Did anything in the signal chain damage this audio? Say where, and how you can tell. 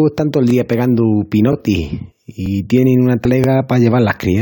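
Yes. Brief stutters at 0.50 s and 3.44 s each replay 25 ms of sound. These are overlapping chunks at the buffer stage: 1.0 s chunks start early and repeat material.

Jumps at 2.10 s and 3.24 s skip roughly 100 ms and 50 ms of audio. These are compressed frames skipped at the codec, with dropped 23.2 ms frames.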